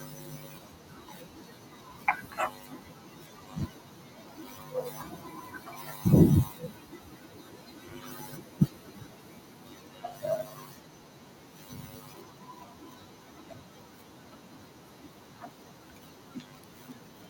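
From the start to 4.74 s, soft consonants and word endings sound swallowed, dipping by up to about 12 dB: speech cut by the noise suppressor, which mistook them for noise. From 4.41 to 6.79 s, as the room noise jumps by about 15 dB near 4.5 s, the noise comes through with less reduction at first, then sinks by about 12 dB over 2.38 s. This is the noise suppressor catching up with a lagging noise estimate. The same swallowing of quiet speech returns at 4.9 to 6.05 s, 6.45 to 10.24 s, and 10.43 s to the end, with drops of about 11 to 13 dB.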